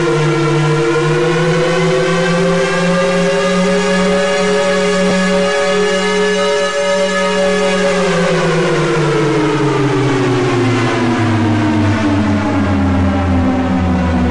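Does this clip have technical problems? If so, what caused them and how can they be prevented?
Yes. A repeated buffer occurs at 5.1 s. New audio arrived too late, so the device played its last block once more, giving a brief click-like stutter with a hard join. The length points to a buffer of about 10 ms. Prevent it with a larger playback buffer and higher audio-thread priority.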